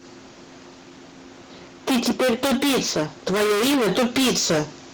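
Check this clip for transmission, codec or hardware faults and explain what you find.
Two faults are audible: heavy hard clipping across the whole speech clip, and a call bitrate drop in the middle.

Hard clipping runs throughout. The signal is driven about 29 dB beyond what a stage can pass, so nearly a third of the samples are sliced flat. The waveform shows squared-off, plateaued peaks. The spectrogram shows harmonic smearing high up. It is heard as constant harsh fuzz on every loud syllable.

A call bitrate drop runs from 2.41 s to 3.97 s, with the worst stretch lasting about 1.5 s. A falling bandwidth estimate made the encoder spend far fewer bits, which fits a cut from 32 to 18 kbps. On the spectrogram the top frequencies vanish and detail turns blotchy. The sound becomes muffled and watery until it recovers.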